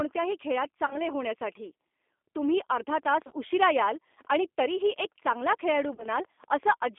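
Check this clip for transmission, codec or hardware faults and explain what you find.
Three faults are present: G.729 codec coding throughout, three bursts of VoIP packet loss concealed by the speech codec, and a train of clicks over the later part.

The speech passes through the G.729 codec for the whole clip, at 8 kbit/s. The codec rebuilds each short frame from a vocal tract filter, a pitch predictor and a few pulses, and the line passes only about 250 Hz to 3.5 kHz. The result is thin, band-limited speech with a plainly rough, synthetic edge.

VoIP packet loss concealed by the speech codec occurs at 0.86–1.02 s, 3.27–3.33 s and 5.95–6.06 s. About 40 ms, 40 ms and 50 ms of audio went missing. In the first and last bursts the gaps are scattered across roughly 80 ms, with the longest run 20 ms and 30 ms. Each time, the decoder extends its last pitch and filter at falling gain. The speech smears into a brief buzzy tone or coloured noise that fades, and stays weak for a moment after the packets resume.

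A train of clicks runs from 2.90 to 6.84 s. It has about thirty ticks at roughly 6.4 per second, irregularly spaced, peaking at about the level of the speech. The ticks are much alike in shape and sound through pauses too. They likely come from electrical interference or a faulty connection or power supply.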